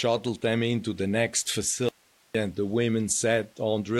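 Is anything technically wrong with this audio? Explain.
Yes, there's an audio dropout to a faint residue from 1.89 to 2.35 s. The speech cuts out abruptly for about 460 ms, leaving only low hiss around 35 dB down, then snaps back. It's likely a brief break in the signal feed while the downstream path stayed live.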